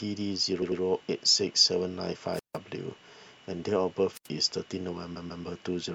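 Speech with repeated frames at 0.61 to 0.81 s, where a 96 ms slice plays twice more, and at 5.15 to 5.44 s, where a 144 ms slice does the same. Unlike an echo, the exact same fragment recurs, stretching the speech. Wireless microphone squelch dropouts hit at 2.33 to 2.58 s and 4.13 to 4.28 s, with mutes of about 155 ms and 80 ms. Each is preceded by rising hiss, which separates them from a clean digital gap.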